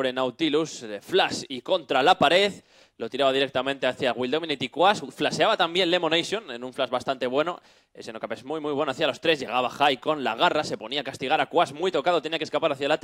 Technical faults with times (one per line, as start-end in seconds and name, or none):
8.88-10.43 sample clock jitter